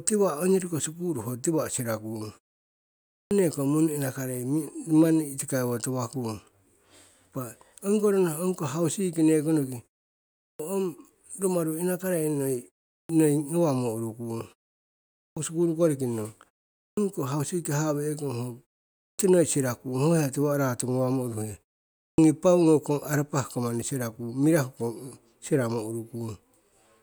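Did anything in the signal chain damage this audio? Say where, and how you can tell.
Yes, a clipped start after a pause at playback: at 3.17, 10.44, 12.95, 15.23 (before "sikulu koriki nong"), 16.83, 19.05 and 22.04 s, speech jumps out of silence missing roughly 0.14 to 0.15 s. The output device dozes during the muted pauses and wakes too late.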